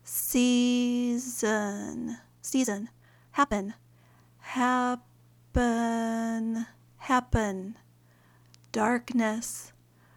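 From 2.33 to 3.99 s there is a time-stretched section, played at 1.9 times normal pace. Likely software squeezed it by dropping short slices. It sounds rushed while pitch holds, and a spectrogram shows compressed events with frequency bands unchanged.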